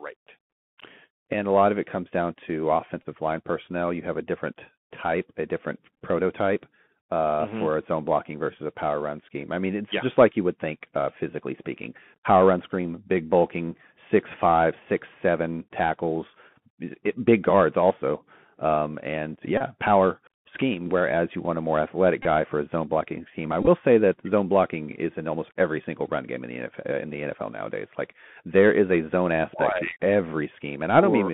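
The whole recording passes through the Bluetooth CVSD headset codec. Nothing above about 3.4 kHz survives, and the low end stops near 150 Hz. The coder sends one bit per sample, at a rate consistent with 64 kbps, and tracks the waveform by stepping up or down. The step cannot keep pace with sharp high sounds. Sibilants turn scratchy, and a grainy hiss sits under the speech throughout.

At 3.03 s, between "it comes down to" and "line personnel", comes the first Bluetooth headset packet repeated. About 22.5 ms of audio was lost. That fits roughly six dropped packets. The chip replayed the last good one, giving a short buzzing patch near 267 Hz. At 5.94 s, after "different type a different", the losses scatter over 45 ms. They total 33.8 ms, with the longest run only about 10 ms, so the buzz comes in broken bursts before "prototype uh". At 19.58 s, just before "power scheme whereas you", about 26.2 ms repeats. 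At 22.23 s, another 26.2 ms drops. At 23.63 s, 30 ms of loss spreads over 45 ms, with one run near 20 ms.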